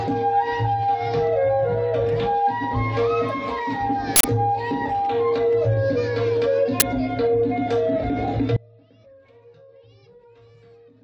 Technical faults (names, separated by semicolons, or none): audio dropout to a faint residue